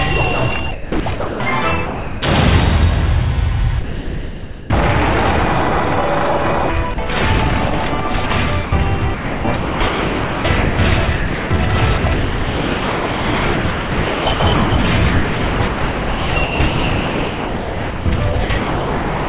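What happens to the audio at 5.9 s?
At 5.9 s the audio is intact, carrying only the steady narrowband character of the call path, with nothing above 4 kHz, which fits G.711 mu-law at 64 kbps.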